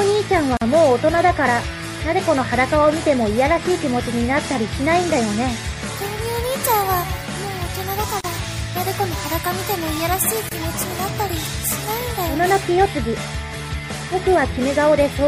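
Throughout, the sound is likely shaped by MP3 compression with too few bits, which fits a low bitrate around 64 kbps: the encoder cuts the treble and drops weak frequency lines frame by frame, so the sound turns watery and swirly, with metallic chirps and smeared attacks.

Separately encoded pieces were joined without trimming each run's start delay and end padding, leaving a gap at a join of encoded pieces: short silences at 0.57 to 0.61 s (45 ms), 8.21 to 8.24 s (37 ms) and 10.49 to 10.52 s (27 ms). Each one breaks continuous sound with smeared edges before it resumes.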